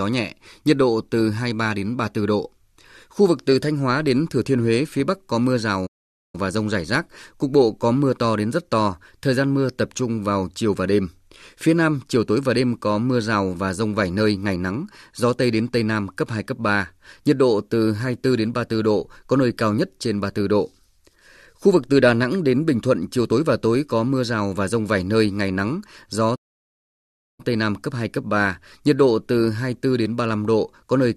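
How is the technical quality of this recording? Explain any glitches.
The speech is interrupted twice by playback stalls. At 5.86 s, just after "có mưa", the audio cuts to silence for about 0.47 s and resumes with "và rông rải rác". At 26.35 s, after "nơi ngày nắng gió", it goes silent for about 1.03 s. The player likely ran short of data or was blocked, so output halted until it recovered. Unlike a packet dropout's brief clipped gap, each stall is a clean, sustained silence mid-flow.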